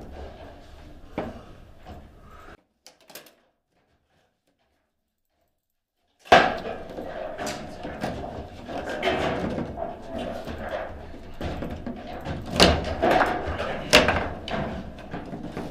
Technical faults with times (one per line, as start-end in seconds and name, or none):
2.55-6.32 one channel inverted